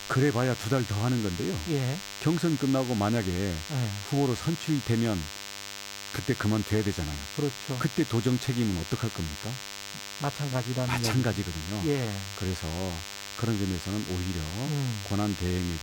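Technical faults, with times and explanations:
Throughout, DECT cordless phone buzz: a steady, thin buzz sits under the speech for the whole clip, roughly 10 dB below it. A nearby DECT handset or base station is transmitting short radio bursts every 10 ms, and the audio circuit rectifies each one into a small click. At 100 clicks per second these fuse into a 100 Hz tone, and the sharp edges of each burst spread energy into many harmonics, giving the raspy character.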